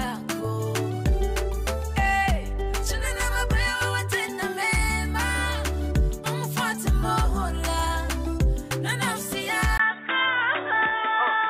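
At 9.78 s a gap of about 20 ms breaks the audio, and from there to the end the sound turns dull and boxy, with nothing above 3.8 kHz and a new background noise roughly 30 dB below the signal. The level stays about the same. On a spectrogram the upper band cuts off sharply at the gap; the waveform shows a brief flat stretch. The likely cause is an input switched to a poorer device.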